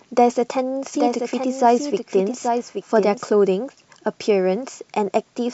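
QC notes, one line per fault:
0.95–3.29 s: doubled audio track. A second, full-band copy of the speech runs roughly 0.7 s behind the original at about 5 dB lower, so each phrase is heard again over the next one with no reverb tail or room colour. The likely cause is a second capture through a slower path. On a spectrogram, identical harmonic patterns repeat at a fixed offset. In the waveform, the overlap switches on and off abruptly at both ends.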